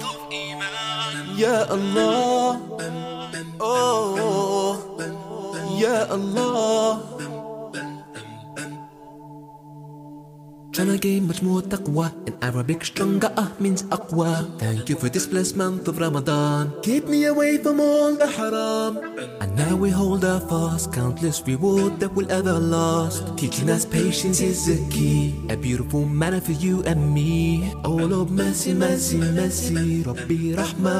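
At 15.35 to 15.37 s there's a single loud pop, a short sharp click riding on top of the sound, which just carries on underneath without a break. It hits hard, roughly 10 dB above the surrounding level, and lasts only about 20 ms. That's the signature of a sudden voltage spike getting into the chain, likely from a static discharge, a switch or a connector being bumped, which the downstream circuitry then shapes into that brief thump.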